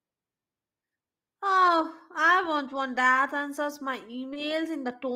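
A speech clip with short concealed packet loss from 4.33 to 4.37 s, just after "want that answers my": about 20 ms of audio never arrived and was filled by extending the preceding sound, heard as a brief smear. A spectrogram would show briefly frozen, blurred harmonics; a waveform, repeated cycles blending back.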